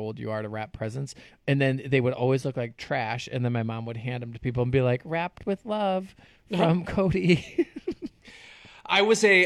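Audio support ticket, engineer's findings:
Speech signal checked by ear with no technical faults found; no dropouts, distortion or timing defects identified for follow-up.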